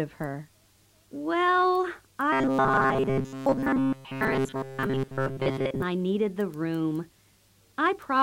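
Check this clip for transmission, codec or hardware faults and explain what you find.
One fault is audible: robotic sound from repeated short buffers, from 2.33 s to 5.82 s. Through most of that stretch the sound collapses into a rigid metallic buzz at 134 Hz. The likely cause is audio arriving too seldom, so the playback side keeps looping the last short chunk, about 7.5 ms, while fresh material is skipped. What sets it apart from codec artefacts or packet-loss dropouts is that fixed, unchanging pitch: a steady drone that still loosely tracks the original contour.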